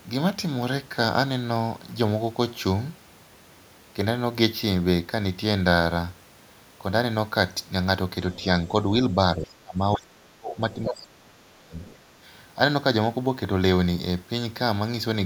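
At 8.32 to 8.44 s a faint second voice slips in, well below the talker: the other side's voice leaking through, likely from loudspeaker echo the canceller failed to remove. It is an added voice, not a change in the talker's own sound. It returns at 10.74 to 10.94 s, now nearly as loud as the talker, and faintly again at 11.81 to 11.97 s. From 9.36 to 11.78 s the talker's speech is likely suppressed in double talk. For about two seconds in all, the voice dips, falling by as much as roughly 30 dB. Unlike a network dropout, the loss follows the overlap rather than striking at random.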